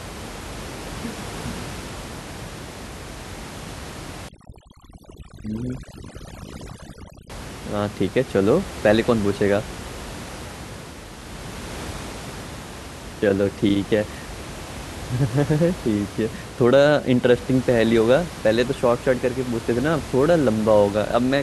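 From 4.29 to 7.30 s, overdone noise removal strips quiet bands near the noise floor. The room noise, about 15 dB below the speech, drops and breaks up into twinkling specks.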